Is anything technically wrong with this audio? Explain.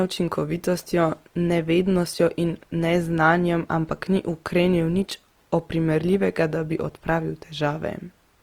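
Yes. Throughout the whole clip the speech carries plainly audible Opus compression damage, likely from encoding at a low rate around 24 kbps. The bandwidth stays full, reaching about 20.2 kHz, so the sound isn't muffled. Instead the encoder's music-style coding keeps each band's energy but fills starved bands with folded or noise-like content, making tonal parts of the voice rough and grainy. Unlike MP3 damage, there is little swirling or warbling from emptied spectral holes.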